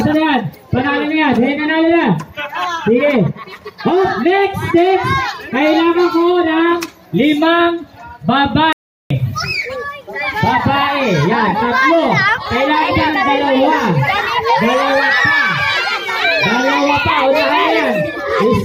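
At 8.73 s the sound cuts out abruptly in mid-flow and stays silent for about 0.38 s, resuming at 9.10 s. This is a playback stall, likely caused by the player running short of buffered data or its output thread being blocked until it recovered.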